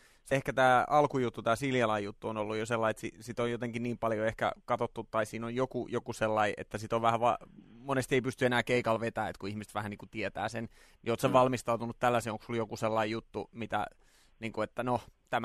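A speech clip with damaged data in a compressed stream at 0.30 s, just before "ehkä tämä alkujuttu tämä": corrupted bytes make the decoder lose sync, giving a brief glitch.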